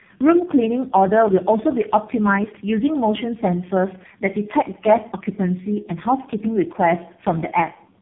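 Tandem speech coding runs through the whole clip: the speech appears to have passed through about three speech codecs in a row, each re-coding the previous one's degraded output, so it sounds rough, muffled and warbly, with nothing above 3.8 kHz.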